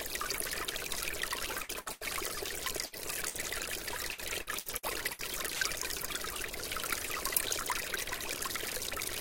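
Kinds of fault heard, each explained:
Short stall from a late packet: Around 1.63 to 1.74 s a packet arrived late, and the receiver filled the wait by stretching the sound already playing for about 57 ms. It then resumed from the same point, so nothing is lost, but the sound holds unnaturally and everything after runs roughly 57 ms later. On a spectrogram the spectral pattern freezes into flat horizontal bands. The waveform shows a smooth, repetitive stretch instead of evolving detail.
Burst of packet loss: Four short dropouts occur at about 1.81, 1.92, 2.86 and 3.28 s. Each loses roughly 60 ms of audio. Concealment continues the last sound for about 54 to 88 ms while fading it, producing a brief held buzz or dimming hiss before playback jumps ahead past the lost portion. Spectrograms show a smeared, decaying band followed by an abrupt change in content. The waveform shows a tapering envelope, then a discontinuity.
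Repeated packet loss (robotic sound): Between 4.12 and 5.64 s, six separate gaps are patched in quick succession, with about 240 ms missing in total and the longest gap around 64 ms. Roughly a quarter of that stretch is synthetic fill, giving a choppy, robotic texture with pieces skipped. A spectrogram shows a striped pattern of frozen, smeared blocks interrupting normal detail. The waveform shows a repeated rhythm of small decays and abrupt restarts.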